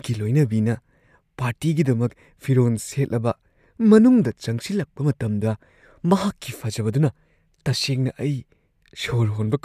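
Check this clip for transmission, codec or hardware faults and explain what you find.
No transmission, codec or hardware faults.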